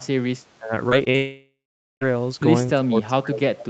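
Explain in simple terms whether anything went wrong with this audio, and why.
Several things go wrong. From 0.00 to 0.29 s, from 0.57 to 0.72 s, and from 2.75 s to the end, the speech sinks sharply or thins out. This is speech suppressed in double talk, likely because the echo canceller mistook the talker for echo while the far side spoke.

At 0.89 to 0.93 s, 1.05 to 1.08 s and 1.10 to 1.16 s the audio briefly smears or wobbles. This is short concealed packet loss: gaps of about 20, 20 and 40 ms were papered over by stretching the sound just before each one.

Right after that, from 1.16 to 2.03 s, the sound turns into a fading, blurred continuation and then goes quiet for roughly the last half second. This is a long network dropout, likely caused by nothing arriving for almost a second, so that stretch is simply lost.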